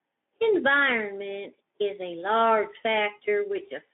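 No technical faults are audible.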